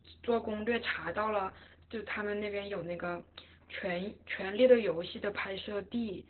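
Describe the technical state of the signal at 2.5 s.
At 2.5 s the speech is passing through Opus voice compression running at a very low bitrate, which fits roughly 8 kbps in the SILK linear-prediction mode, and it stays that way for the whole clip. The coder has dropped to narrowband, so nothing above about 4.3 kHz survives, and the excitation is coded coarsely. The speech sounds muffled and telephone-thin, with a hoarse, slightly robotic edge from the heavy coding damage.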